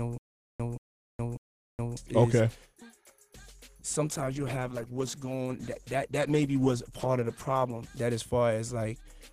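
From the very start until 1.97 s, a stutter with silent gaps is already under way. A 179 ms burst repeats three times, each followed by 418 ms of digital silence, so it recurs every 597 ms. A stalled stream likely replayed its last fragment at each retry. On a waveform, identical blocks sit between flat silent stretches.

From 4.14 to 7.99 s, a call bitrate drop makes the audio rough and muffled, with the high frequencies cut away. This fits the encoder falling from about 128 to 14 kbps for nearly 3.8 s. A spectrogram shows the upper bands blank, with smeared, blocky energy below.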